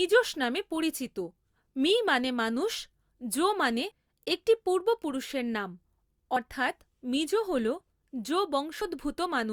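At 8.81 s the speech skips forward, with roughly 50 ms missing and the two sides butted together without any gap. This is audio missing between chunks, likely caused by the processor dropping material while switching between 2.5 s chunks.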